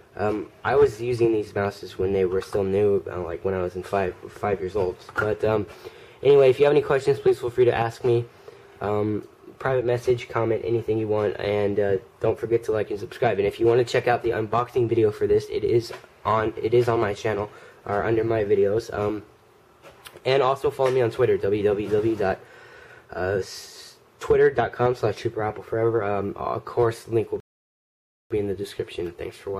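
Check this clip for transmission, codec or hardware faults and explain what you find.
There is one fault, a rebuffering stall. From 27.40 to 28.31 s, the player runs out of downloaded audio. The sound drops to silence for about 0.9 s, then resumes exactly where it stopped, with nothing lost.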